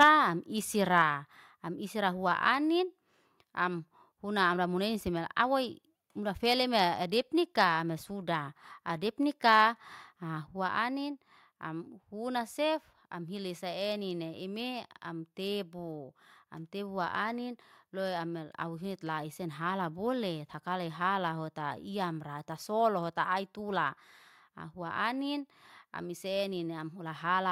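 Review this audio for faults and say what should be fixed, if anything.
Microphone overload at 0.00–0.08 s (about 5 dB over) and 9.48–9.63 s (about 1 dB over): the loudest peaks have flattened tops and a harsh crackle, likely from excessive input gain. The crackle appears only on peaks, unlike steady codec distortion.

Microphone volume stepped down at 0.03 s (about 4 dB), 1.02 s and 10.47 s (about 3 dB each): voice and background drop together in one abrupt step, not a gradual fade.

To prevent both, set the microphone input lower before recording and disable the call software's automatic gain adjustment.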